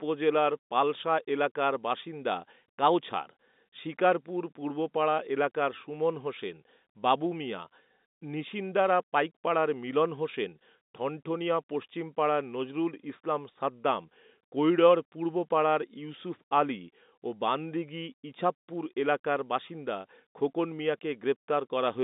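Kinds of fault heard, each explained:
No faults are heard in the speech. It has the sound of ordinary G.711 telephone coding, with a line band of about 200 Hz to 3.7 kHz and nothing above 3.8 kHz.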